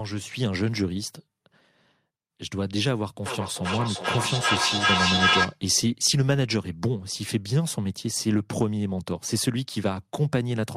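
From 3.26 to 5.61 s, feedback echo between two devices: a second device replays the speech into a nearby microphone, so each syllable returns about every 0.4 s. The repeats build to about 3 dB above the speech, and a spectrogram shows evenly spaced, stacked copies.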